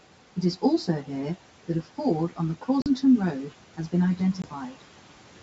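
Speech runs hollow and phasey for the whole clip, with a fixed coloration that never moves. That is channel delay (comb filtering). One channel arrives roughly 10 ms behind the other, and when the two are summed to mono, sound common to both cancels at evenly spaced frequencies. The first notch sits somewhere around 40 Hz, with further notches repeating up the spectrum. Packet loss on an ADPCM call adds two hard-edged dropouts. The first is at 2.82 to 2.87 s, with about 40 ms of sound missing, which fits two lost packets. The second is at 4.42 to 4.49 s, with about 20 ms missing, which points to a single packet. Each gap is filled with silence, and the decoder's adaptive predictor and step size lose track of the sender's. As speech returns it comes back slightly distorted, then settles within the following tens of milliseconds. Room noise sits about 20 dB below the speech, and the G.722 wideband coding at 64 kbit/s shows little if any damage of its own.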